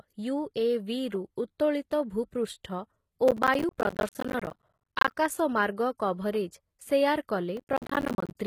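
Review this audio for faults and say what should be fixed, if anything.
The speech has a gritty, lispy treble throughout, and nothing is heard above 14.9 kHz. This is likely HE-AAC compression, which fits a rate near 20 kbps. The upper band is copied from lower bands, so the harmonics misalign. Encode at a higher bitrate.

Processor overload crackle tears through the audio from 3.28 to 5.12 s and again from 7.57 to 8.35 s. Dozens of buffers of about 10 ms arrive late. Each leaves a hard-edged silent gap. Reduce processing load or enlarge the buffer.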